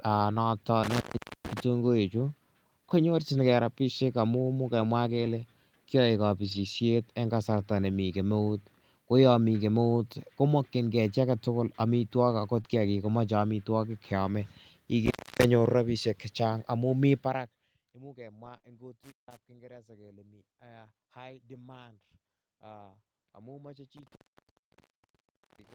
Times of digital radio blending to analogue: none

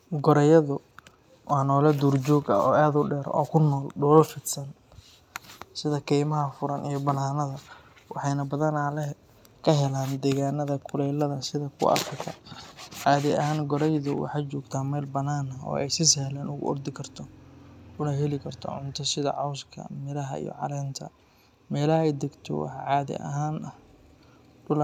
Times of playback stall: none

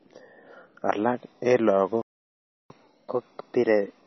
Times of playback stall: 2.02-2.70

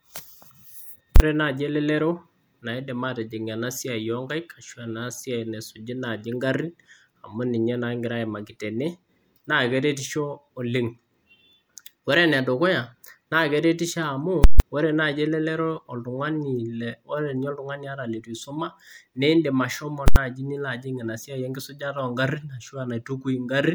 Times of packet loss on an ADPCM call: none

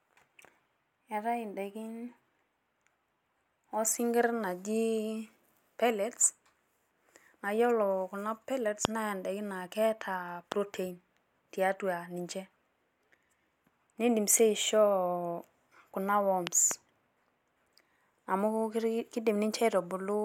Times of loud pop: 8.85-8.87, 10.52-10.54, 16.47-16.73

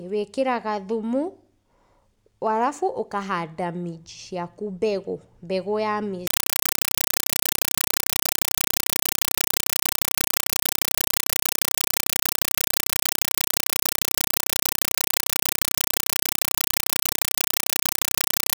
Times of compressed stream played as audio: 6.27-18.59

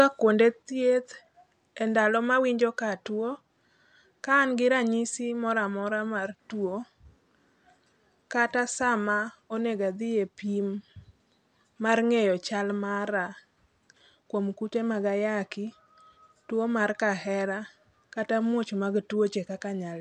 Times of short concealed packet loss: none

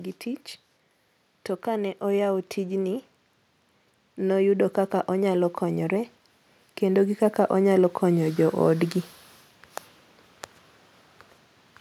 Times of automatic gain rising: 6.80-8.98

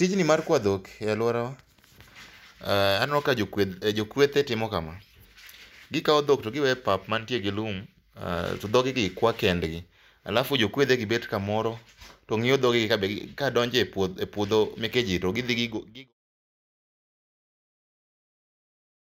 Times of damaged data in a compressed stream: none

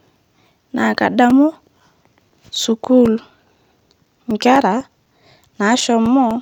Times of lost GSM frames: none

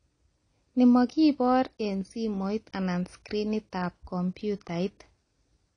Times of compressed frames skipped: none

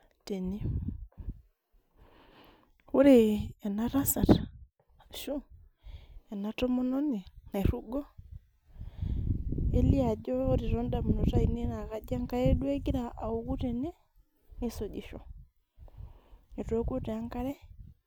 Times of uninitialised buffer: none

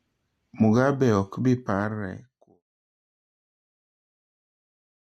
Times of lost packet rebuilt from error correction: none

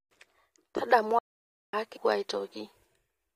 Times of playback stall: 1.19-1.73

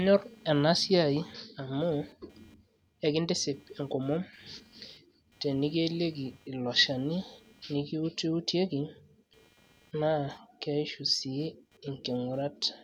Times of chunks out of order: none

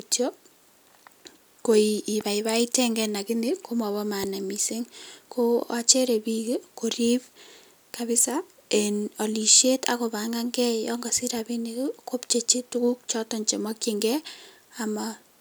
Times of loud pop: 2.21-2.23, 4.24-4.26

